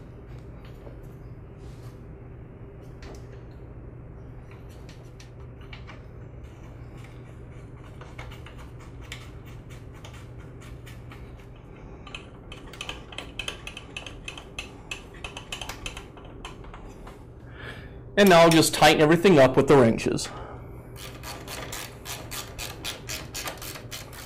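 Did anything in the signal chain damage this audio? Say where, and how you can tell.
No, nothing in the signal chain damaged this audio, and no stage shows any sign of harm.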